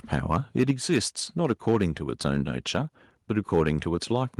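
From 0.13 to 0.98 s the speech shows microphone overload. The input was likely set too high, so peaks run about 4 dB past the converter's ceiling and their tops are sheared off. That gives the loudest syllables a harsh, crackling edge. On a waveform the peaks sit as flat plateaus, roughly a percent or so of samples. A spectrogram shows broadband smearing up through the kHz range at each clipped peak.

Inside that stretch, at 0.71 s, the microphone volume is stepped down. Both the speech and the background drop by about 4 dB in one step, likely because the call software reacted to the distorted peaks just before. The waveform envelope narrows abruptly at that point, and the spectrogram darkens evenly across all frequencies rather than fading gradually.

Overload returns at 1.44 to 1.85 s (about 3 dB over), 2.26 to 2.37 s (about 2 dB), 2.75 to 2.77 s (about 1 dB) and 3.37 to 3.71 s (about 4 dB). 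Each shows the same squared-off peaks and crackle, so the lowered input was still not low enough.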